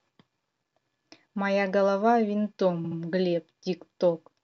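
From 2.84 s to 2.97 s the speech stutters as one 69.7 ms block plays three times in a row. These are repeated frames: a short run of compressed frames, consistent with about three frames, was decoded again, lengthening the audio by 139.3 ms.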